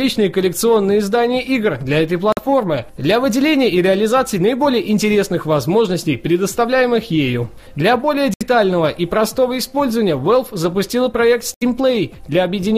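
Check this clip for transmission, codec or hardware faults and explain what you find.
There are three short gaps, most likely a Bluetooth dropout, at 2.32–2.39 s, 8.34–8.43 s and 11.54–11.63 s. Packets missed their deadline, so the output cut to silence, then picked up further along, skipping roughly 46 to 70 ms of material.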